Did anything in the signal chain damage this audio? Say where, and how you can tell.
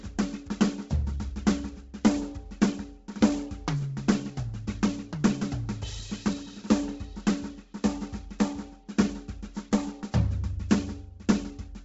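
Yes, at the codec stage: throughout, the music stops dead at 7.8 kHz with grainy highs, likely Bluetooth LC3 compression zeroing upper bands and filling them with noise. A spectrogram shows a hard ceiling over speckled patches.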